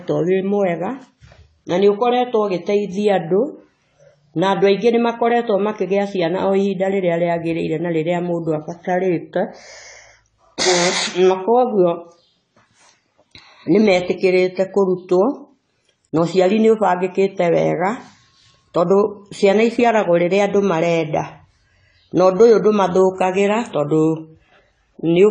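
A low-bitrate encode, most likely AAC compression with the AAC-LC codec at around 24 kbps, runs through the whole of this speech recording. With too few bits for each frame, the encoder discards everything above about 9.9 kHz, so the top octave is simply missing and the sound is dull and closed-in. The remaining spectrum is coarsely quantised, and the damage is plainly audible as a smeared, warbling texture with fizzy, unstable sibilants.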